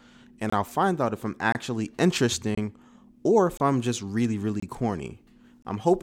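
A gap between chunks, about 25 ms of silence, cuts the speech at 0.50, 1.52 (after "find out if I'm"), 2.55, 3.57 (between "or if" and "I'm just really"), 4.60 and 5.62 s. The audio arrives in one-second chunks with dead air inserted at each join. These are heard as regular clipped holes, which appear as flat-line gaps in the waveform and as blank vertical strips with sharp edges on a spectrogram.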